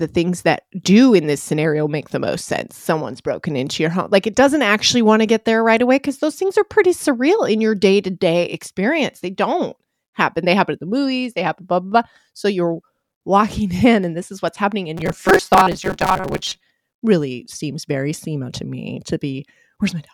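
From 14.97 to 16.62 s, new audio likely arrived too seldom, so the software kept replaying a short buffer while about half the real audio was skipped. This robotic sound from repeated short buffers imposes a rigid, metallic 188 Hz buzz, which fits a buffer of about 5 ms.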